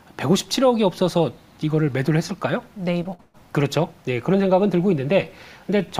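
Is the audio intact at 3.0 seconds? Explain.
No, not quite. Right around 3.03 to 3.07 s there's a short concealed packet loss. About 20 ms of audio never arrived in time, so the receiver improvised roughly 14 ms of stand-in by stretching out the sound just before the gap, then cross-faded back into the real signal. To the ear it's a quick smear or wobble.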